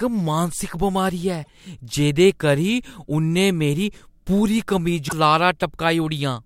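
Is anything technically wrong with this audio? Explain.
Yes. Damaged data in a compressed stream breaks into the speech twice, from 1.41 to 1.48 s and from 5.05 to 5.13 s, the second right after "मेरी पूरी". In each 74 ms stretch the decoder misreads corrupted frames and hunts for the next valid header, producing a brief break in the speech.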